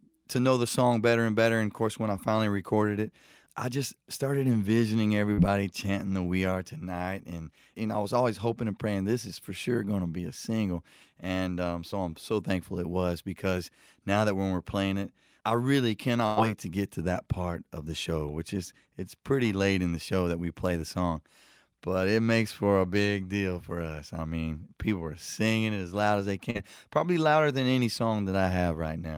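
Around 5.33 s, 11.91 s and 26.50 s there's short concealed packet loss: roughly 40, 20 and 40 ms never arrived, so the decoder stretched the previous sound over the gap, leaving a quick smear or wobble. At 16.26 s comes a burst of packet loss, about 100 ms gone, bridged by a fading continuation before the sound picks up again further along.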